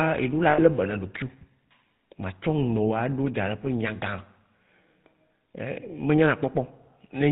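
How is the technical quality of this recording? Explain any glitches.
The recording is band-limited, buzzy telephone speech with one short dropout near the start.

Throughout, the voice sounds gravelly and buzzy, with nothing above 4 kHz. This is GSM full-rate codec damage, plainly audible, which fits 13 kbps coding from a vocal-tract model driven by sparse, regular pulses.

From 0.5 to 0.6 s, the sound freezes into a rough, metallic ring for about 80 ms. These are lost GSM frames: the decoder repeated the last good frame.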